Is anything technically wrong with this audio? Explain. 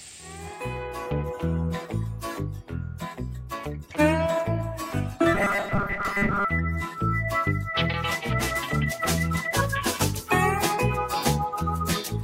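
Yes, there's robotic sound from repeated short buffers between 5.35 and 6.45 s. The audio turns into a rigid, metallic buzz pinned at 200 Hz that still loosely follows the underlying sound. The likely cause is new audio arriving too seldom, so the playback keeps looping its last few milliseconds to fill the gaps, which fits a 5 ms buffer. Roughly two-thirds or more of that stretch is repeated material, and the real audio in between is skipped.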